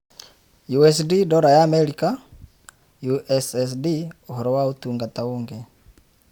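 No technical faults are audible.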